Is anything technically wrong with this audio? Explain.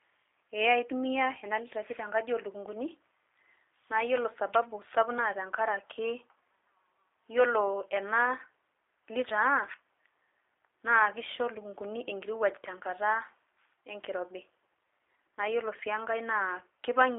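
Yes. Throughout, the speech has passed through a G.729 codec, likely at 8 kbit/s, which rebuilds it from a filter model and sparse pulses, leaving it rough, synthetic and band-limited to about 300 Hz to 3.7 kHz.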